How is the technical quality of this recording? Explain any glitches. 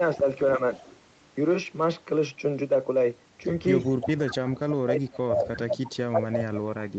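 The recording has two recurring call-processing glitches on top of a band limit at 8 kHz from the Opus call path.

Speech suppressed in double talk occurs at 0.19–0.25 s (a dip of about 5 dB), at 4.14–5.79 s, and from 6.08 s to the end, where the level falls by about 30 dB. The likely cause is the echo canceller mistaking simultaneous talk for echo and attenuating the voice, so the speech sinks and partly drops out.

An echo leak appears at 0.75–0.96 s and 5.84–5.91 s as a faint delayed copy of the voice, 347 ms behind it and about 30 dB and 20 dB below the speech respectively. It is likely the far end's loudspeaker echo getting past incomplete cancellation and being sent back.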